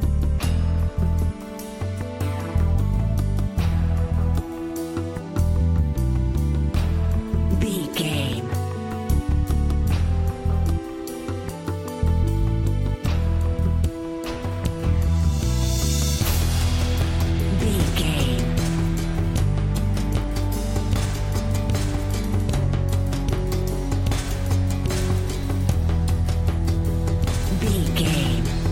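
Nothing here sounds wrong at any point, so there's no fault to point out.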